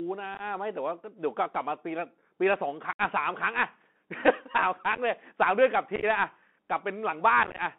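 The whole clip of speech sits on a Bluetooth CVSD headset codec. Everything is squeezed into roughly 200 Hz to 3.5 kHz, which fits the one-bit-per-sample 64 kbps CVSD link. Its adaptive step can't keep up with quick, loud changes, so sibilants turn scratchy and a grainy hiss rides underneath.

Then there's unconcealed Bluetooth headset packet loss, with holes left as abrupt silence. At 0.35 s about 30 ms drops out in bits across 52 ms. At 2.93 s a solid 64 ms gap opens. At 4.95 s 22 ms is scattered over 30 ms. At 5.96 s 45 ms goes over 68 ms. The roughest stretch is at 7.43 s, where 82 ms is lost across 158 ms in about 20 short packets, so it crackles and chops.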